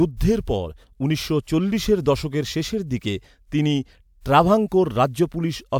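A short stretch of speech, and nothing technically wrong turns up anywhere in it.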